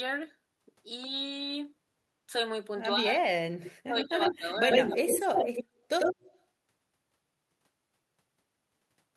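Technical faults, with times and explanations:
2.99–3.28 s, 3.84–5.42 s and 5.58–5.72 s: speech suppressed in double talk. The speech drops sharply, by about 35 dB at first, about 15 dB through the long middle stretch, and about 30 dB near 5.6 s. An echo canceller likely turned both talkers down while the other side spoke.
3.64–3.71 s, 3.96–4.53 s, 4.69–5.64 s and 5.99–6.42 s: echo leak. A copy of the speech returns 95 ms late. It starts faint, about 15 dB below the speech. Later it matches the speech or exceeds it by about 5 dB. Loudspeaker pickup that the canceller missed is the likely cause.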